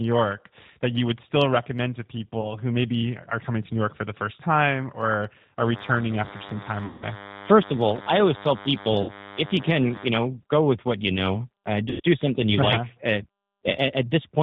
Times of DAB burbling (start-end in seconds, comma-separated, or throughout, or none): none